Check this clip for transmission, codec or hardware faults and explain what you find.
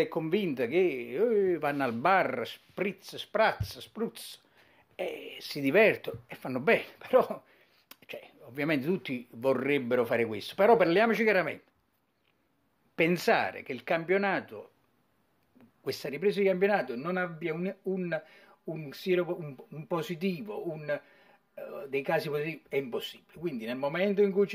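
There's one fault here, channel delay (comb filtering), from 16.06 s to the end. One channel runs about 5 ms late and gets summed to mono, so shared content cancels at evenly spaced frequencies starting around 100 Hz. The sound turns hollow and phasey.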